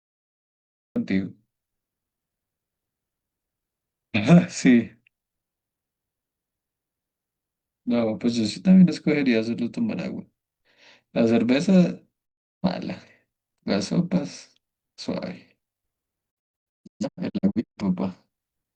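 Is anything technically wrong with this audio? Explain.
Yes, there are two kinds of fault.

The clip has a cut-off start: the capture began late, so the first 0.96 s is digital silence and the speech then enters abruptly mid-sound at 0.96 s, with no natural onset or fade-in, as though sliced from a longer stream.

There are also two digital broadcast dropouts, where the receiver lost valid frames and muted until good data returned. From 12.25 to 12.66 s the sound fades out over about 20 ms into one hole of roughly 0.34 s, which fits a handful of consecutive bad frames. From 16.3 to 17.82 s the muting comes in several short gaps spread over about 1.45 s, the longest 128 ms, totalling roughly 0.85 s of missing speech. It sounds like stuttering holes before the audio settles.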